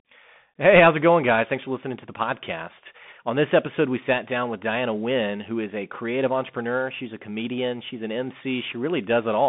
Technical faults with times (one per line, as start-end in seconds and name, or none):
0.00-9.48 Bluetooth CVSD headset codec